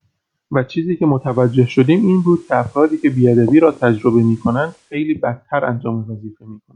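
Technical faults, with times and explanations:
1.12–5.03 s, digital radio blending to analogue: the receiver lost the digital signal and faded to FM over 0.3 s, shifting level about 3 dB and adding faint hiss.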